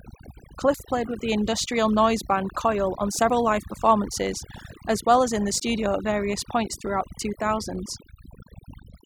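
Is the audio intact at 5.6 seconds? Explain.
No. At 5.6 s the speech jumps forward with no gap, the likely result of a dropped buffer (overrun), where a chunk of roughly 20 ms was overwritten before being read. Unlike a dropout, no silence is left; the two sides simply butt together. Overdone noise removal runs through the whole clip, leaving a lowered background with twinkling specks, because frequency bands near the noise estimate are pushed down. That is a steady colouring, not a single click.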